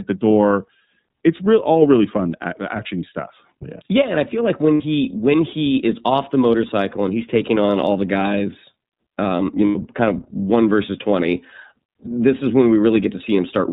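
iLBC codec coloring runs through the whole of this speech recording: nothing above 4 kHz survives, and each 30 ms block, which fits iLBC's 13.33 kbps mode, is coded on its own, so the voice sounds plainly rough and slightly synthetic. Lost iLBC frames occur at 4.74–4.81 s, between "I feel like when" and "when he is off", and at 9.66–9.76 s, between "the guys um you" and "kind of one versus". The decoder bridges each gap by repeating the last pitch cycle mixed with noise, heard as a held, buzzy vowel lasting about 60 ms and 90 ms, which points to two and three missing frames.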